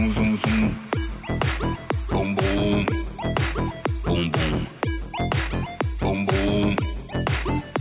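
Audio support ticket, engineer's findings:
No faults found; signal band-limited with nothing above 4 kHz, consistent with a narrowband call path and fitting G.711 A-law coding at 64 kbps.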